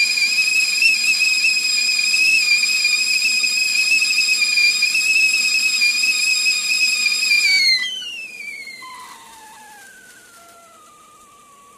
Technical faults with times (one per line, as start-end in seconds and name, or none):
none